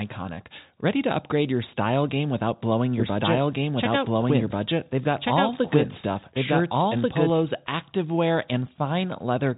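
From 3.0 s to 7.3 s the speech is accompanied by a doubled audio track: a second, full-band copy trailing roughly one and a half seconds behind at about the same level. There is no decay or room colour on it, and it cuts in and out abruptly. That points to the audio likely being captured twice through a slower second path. On a spectrogram, the same speech patterns repeat shifted along the time axis. The waveform shows overlapping envelopes with hard edges at both ends, and everything is held below 3.8 kHz by the telephone band.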